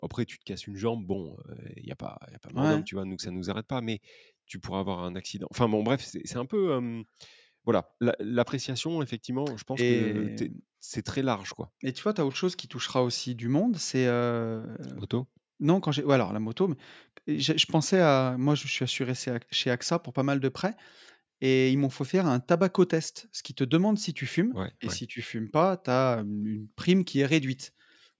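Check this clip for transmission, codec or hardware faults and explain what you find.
One fault stands out in this speech clip, heard over audio that carries nothing above 8 kHz from the call's microphone processing.

Dropped samples at 16.16 s, between "quand j'ai ou" and "la moto mais je": a handful of samples, a fraction of a millisecond, likely went missing, so the waveform leaps straight to a later value. That step is heard as one sharp click, far too brief to remove any sound.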